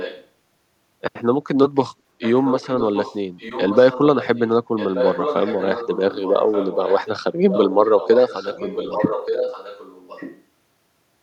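Echo leak at 0 to 0.27, 2.22 to 3.17, 3.38 to 4.42, 4.76 to 7.11, 7.51 to 7.74 and 7.98 to 10.43 s: a copy of the speech returns about 1.18 s late, roughly 10 dB down (weaker, about 15 dB down, at 3.38 s), likely from a far-end echo canceller missing loudspeaker pickup.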